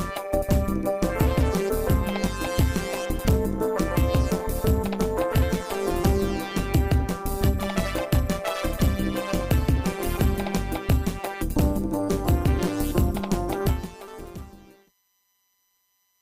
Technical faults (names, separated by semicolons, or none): overlap-add ripple